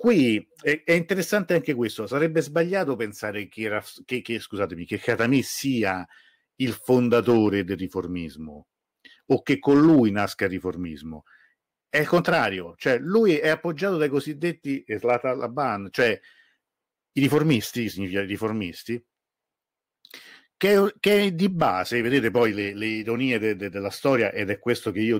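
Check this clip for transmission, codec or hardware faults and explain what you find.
Hard clipping runs through the whole speech clip. The signal reaches the converter or gain stage about 5 dB hotter than it can pass, so peaks are sliced flat. Only a small fraction of samples, around half a percent, cross the limit. Those flattened tops add high harmonics, heard as brief crackle on the loudest syllables.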